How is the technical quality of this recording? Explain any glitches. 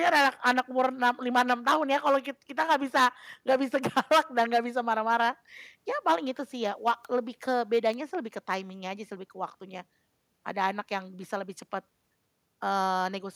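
The recording has three isolated clicks, each a bit error spike. At 0.60 s, 7.05 s and 7.94 s, a single bit flipped in memory or on a digital link, pushing one sample, or a few consecutive ones, up or down by a power of two before the value snapped back. Because the jump has nothing to do with the speech, each one is heard as a brief, sharp tick spread evenly across the spectrum.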